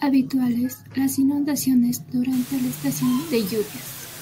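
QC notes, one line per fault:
2.33 to 4.21 s, low bit depth with dither: right after "las inundaciones" a steady, even hiss appears under the speech and stays to the end, sitting only about 15 dB below it, yet the speech itself carries no grit or distortion. The sound points to roughly 5-bit resolution, with dither added before rounding, which turns the coarse rounding error into constant broadband noise rather than harsh, signal-dependent distortion.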